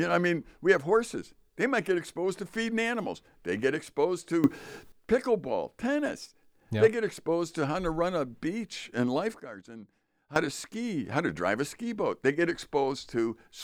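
At 4.44 s, after "get exposed", a sudden gain jump lifts speech and background noise together by about 14 dB until 4.92 s. At 9.4 s, after "run a beach and", both drop about 14 dB until 10.36 s. The likely cause is a gain change applied without a ramp.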